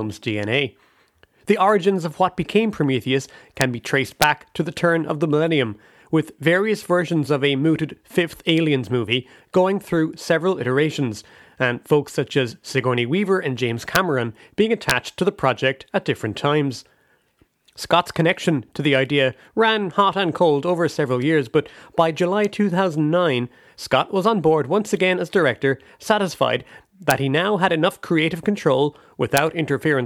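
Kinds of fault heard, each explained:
Integer overflow: peaks barely past the integer limit wrapped to the opposite sign instead of clipping, giving six sharp cracks in the speech.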